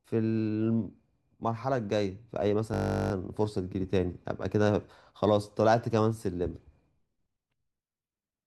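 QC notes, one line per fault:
2.74–3.12 s, system hang loop: a 20 ms slice of speech repeats about 19 times at 50 Hz, a steady buzz from a frozen system replaying its buffer.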